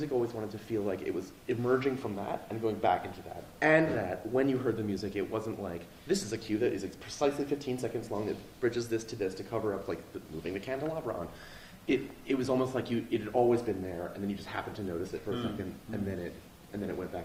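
At 11.25 s the audio suffers a call bitrate drop: the connection's bandwidth estimate fell and the encoder was forced onto a much smaller bit budget. The rate falls from about 64 kbps to around 23 kbps and stays at that low point for roughly 5 s, through to the end. With fewer bits, the encoder quantises more coarsely and trims the top of the spectrum, so the sound turns rougher and duller from 11.25 s onward.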